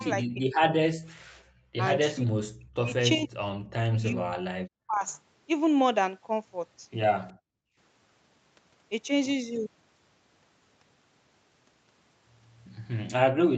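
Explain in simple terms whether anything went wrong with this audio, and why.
Several things went wrong, all tied to the call's echo control.

The talker's voice sinks deep, loses its brightness or breaks into pieces from 0.0 to 1.13 s, briefly and more gently at 1.77 to 1.84 s, and again at 2.13 to 2.94 s, 3.15 to 3.57 s and 3.98 to 5.06 s. This is speech suppressed in double talk, likely because both sides spoke at once and the echo canceller couldn't tell the local talker from the loudspeaker's echo, so it turned everything down. What sets it apart from gating is that the voice itself is damaged, not just the quiet room sound between phrases.

The background gated by the echo canceller shows up as the room sound dropping away for a moment at 1.42 to 1.49 s, and for nearly half a second at 7.33 to 7.77 s, then coming back. Here the canceller clamped the microphone while the loudspeaker played. 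Unlike double-talk suppression, no voice is cut. Only the background vanishes, which makes the line sound briefly dead.

At 7.28 to 7.33 s there is a very faint echo leak: a tiny scrap of voice returns about a third of a second late, likely from a loudspeaker whose sound the canceller didn't fully remove. It differs from the two faults above because it adds an unwanted sound rather than taking sound away, and it sits just before the second background dropout.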